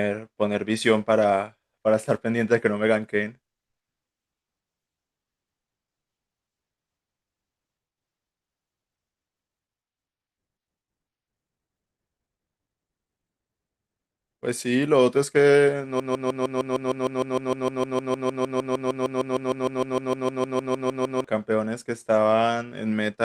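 At 16.00 s the speech locks into a broken-record loop that runs until 21.24 s. A fragment about 0.15 s long repeats exactly, back to back, 34 times, giving a rapid mechanical stutter at roughly six to seven cycles per second. The player or stream likely stalled and kept re-sending the last chunk it held, so the speech that belonged in those five seconds is missing when playback resumes.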